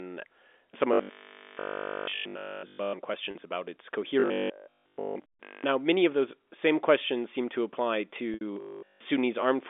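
From 0.93 to 2.93 s the speech turns into a rigid, metallic buzz at 50 Hz: robotic sound from repeated short buffers, likely caused by audio arriving too seldom so that a 20 ms buffer is replayed in place of essentially all the real signal. The same buzz returns from 4.20 to 5.64 s, between "about its" and "uh now many of", and from 8.53 to 9.03 s, after "questions seem to apply". Packet loss with pitch repetition bridges a 40 ms gap at 3.31 to 3.35 s and a 20 ms gap at 5.32 to 5.34 s, both heard as a briefly held, buzzy note. A 70 ms gap at 8.34 to 8.41 s, just after "questions seem to apply", fades toward silence before the speech cross-fades back. Throughout, the G.711 A-law telephone band limits the sound to roughly 250 Hz to 3.5 kHz.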